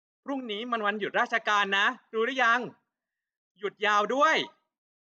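No technical faults can be heard anywhere in the speech. With no events to place in time, there is nothing to describe in sequence.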